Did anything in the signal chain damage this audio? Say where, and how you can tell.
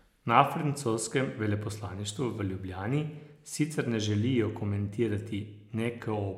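No, nothing in the signal chain damaged this speech.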